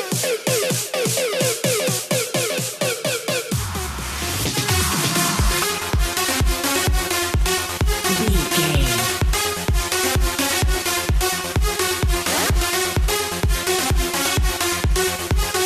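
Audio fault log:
5.62 s, damaged data in a compressed stream: a short glitch lasting roughly 10 ms breaks into the sound. Bytes in the encoded stream at this point were corrupted, so the decoder could not interpret the affected frame correctly. It lost frame sync and scanned forward for the next valid header before resuming normal decoding. That brief stretch of misdecoded data is what comes through as the glitch.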